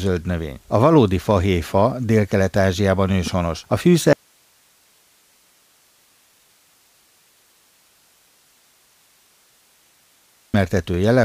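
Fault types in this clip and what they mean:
Audio dropout to a faint residue: from 4.13 s to 10.54 s, about 6.4 s, the speech cuts off abruptly and the gap holds only hiss, around 40 dB below the normal level, until the speech returns just as suddenly. Those hard edges set it apart from a pause or a fade. The likely cause is that the wanted signal was lost while the path after the break stayed live and passed only its own noise.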